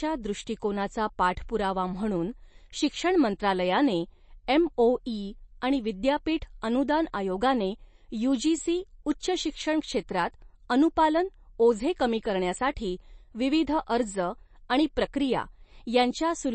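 Throughout, the speech sounds watery and swirly, with treble ending abruptly at 8.3 kHz. A spectrogram shows a hard ceiling and flickering holes, likely from low-bitrate MP3 compression.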